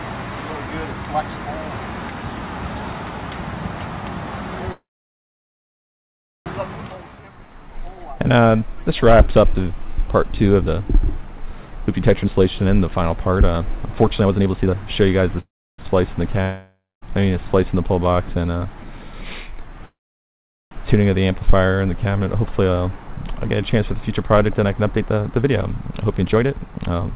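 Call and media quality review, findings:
Call audio freeze at 4.72–6.48 s, 15.40–15.80 s and 19.85–20.73 s. Last sound extended as a fading buzz or hiss, then silence. Likely held-up packets draining the jitter buffer. Gaps of 1.74 s, 0.39 s and 0.86 s inserted, with nothing skipped.

Jitter buffer slow-down at 7.03–7.23 s. Plays at 78% speed with unchanged pitch and drawn-out sound. Receiver repeated pitch periods, adding 54 ms to rebuild its reserve.

Jitter buffer speed-up at 11.68–15.23 s at 125% and from 22.07 s to the end at 117%. Hurried at the same pitch. Pitch-period chunks dropped to shed excess delay, roughly a second each time.

Long network dropout at 16.42–17.03 s. Fading fill then silence, resuming about 0.6 s further on with that audio gone. Likely no packets received.

The narrowband sound, with nothing above 4 kHz, fits the 64 kbps G.711 A-law call path.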